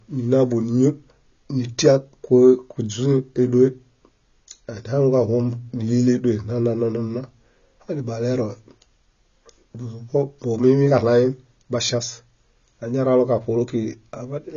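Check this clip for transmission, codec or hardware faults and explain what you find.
One fault runs through the whole clip: the speech sounds dull and smeared, with nothing above about 6.9 kHz, and sibilants and sustained vowels carry a fizzy, warbling texture. This is likely AAC compression at a low bitrate, consistent with AAC-LC around 24 kbps. With too few bits, the encoder drops the top of the spectrum entirely and quantises what remains so coarsely that gaps and substitute noise become plainly audible.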